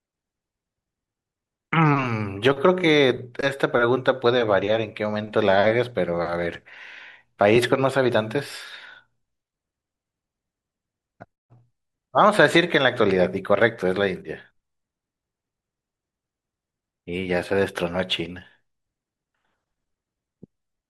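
A speech recording with no technical faults to point to. Nothing in it calls for a timestamp or a cause.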